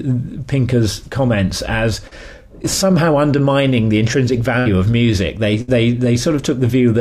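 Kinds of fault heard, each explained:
short concealed packet loss: a brief smear or wobble at 2.07 s, where about 40 ms never arrived in time and the receiver continued the preceding sound.
burst of packet loss: held buzz or fading hiss at 4.59 s and 5.61 s, each covering about 60 ms lost in transit, filled by a decaying continuation before the audio resumes.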